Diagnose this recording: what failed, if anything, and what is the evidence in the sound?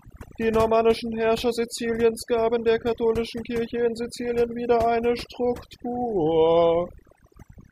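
Overdone noise removal in the call-processing stage, throughout: near-silent background with twinkling specks. This is band-by-band gating, not codec smearing.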